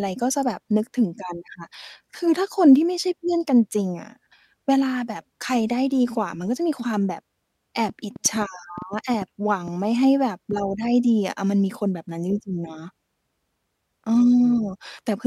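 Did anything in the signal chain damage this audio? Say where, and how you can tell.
Yes, there's a train of clicks from 7.89 to 9.69 s in the speech. You get about ten sharp, similar-shaped ticks at an uneven pace averaging around 5.6 per second, each poking a few dB above the speech and audible in the gaps as well. That repeated, same-shape pulse riding on top of the audio is most likely interference getting into the analogue wiring from nearby gear, not a codec or network fault.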